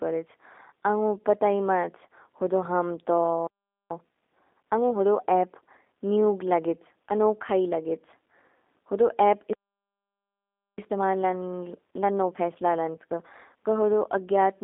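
G.729 codec damage runs through the whole speech clip. The line is confined to roughly 250 Hz to 3.7 kHz, with nothing above 3.8 kHz, which fits 8 kbit/s G.729. The speech is rebuilt from a vocal tract filter, pitch prediction and sparse pulses, so it sounds plainly rough and synthetic.

A playback stall from 3.47 to 3.90 s cuts the sound off mid-flow for about 0.44 s. The player was likely starved of data or blocked before output resumed.

Time-compressed catch-up follows from 3.90 to 5.64 s. The player drains its backlog by cutting and cross-fading small pieces, so the speech runs about 1.25 times faster at normal pitch and sounds hurried.

A second playback stall begins at 9.53 s, just after "होदो एपु", and lasts until 10.78 s. This silence of about 1.25 s has the same likely cause, an underrun or a blocked playback thread.

Time-compressed catch-up then runs from 10.78 to 13.78 s at about 1.15 times speed. 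The pitch stays steady, but the audio sounds rushed.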